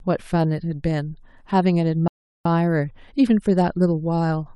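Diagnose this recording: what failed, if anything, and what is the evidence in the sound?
The playback side hit a rebuffering stall. At 2.08 s the speech drops to dead silence and sits there until 2.45 s, then carries on from exactly the point where it cut off. Nothing is skipped or repeated, so about 0.37 s of extra time has been inserted. That's the player running its downloaded audio dry and waiting for more data to arrive before continuing.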